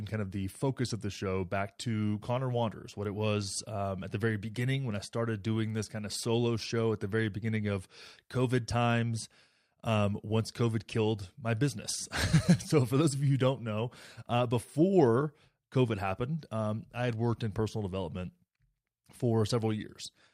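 Nothing here calls for comment, since no technical faults turn up anywhere in this speech recording.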